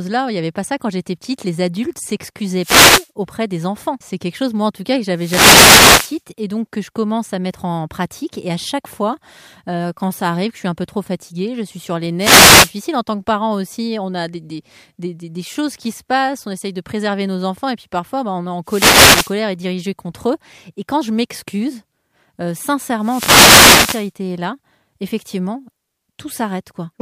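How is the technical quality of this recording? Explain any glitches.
The speech is repeatedly broken by wireless microphone noise hits: short swishes of static at 2.58–3.10, 5.13–6.22, 12.19–12.72, 18.65–19.35 and 22.99–24.12 s. They come from the analogue FM radio link fading as reflections cancel, letting receiver noise rise.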